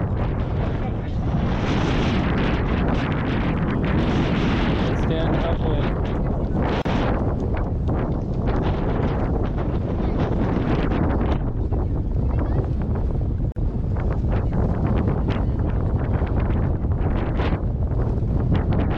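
At 6.82 s and again at 13.52 s there's a gap at a join of encoded pieces: about 34 ms then 42 ms long, where encoder delay and end padding weren't trimmed, and the sound picks straight back up.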